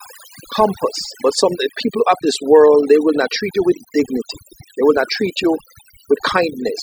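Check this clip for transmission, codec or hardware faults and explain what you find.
One fault runs through the whole clip: overdone noise removal. Aggressive noise reduction switches off frequency bands near its noise estimate, leaving near-silent gaps with twinkling specks.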